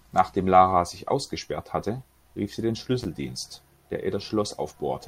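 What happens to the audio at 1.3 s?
Nothing goes wrong at 1.3 s: the speech there plays through intact, with no dropout, click or other fault.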